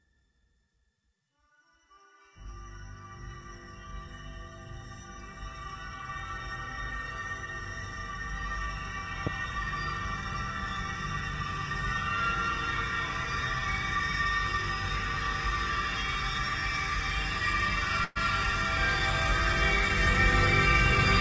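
A recording of everyday sounds carried over a call link. Nothing above 8 kHz survives, which fits G.722 at 64 kbps. From 9.27 to 9.30 s there is a single loud pop, roughly 15 dB above the surrounding sound. The sound continues beneath it. A sudden voltage step, likely from a switch, plug or static discharge, was added to the signal. From 18.04 to 18.18 s comes a call audio freeze. For 116 ms the last sound is held as a fading buzz or hiss. Late packets likely drained the jitter buffer. Playback then resumes where it stopped, with nothing lost, just 116 ms later.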